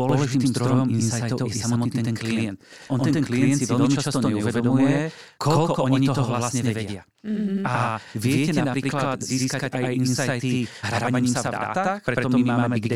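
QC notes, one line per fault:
Throughout: channel delay (doubling). One channel arrives about 93 ms late, which fits a 4096-sample buffer, and the mono sum plays both copies at equal level. The speech gets a distinct slap echo rather than comb-filter coloration, because the gap is long enough to separate.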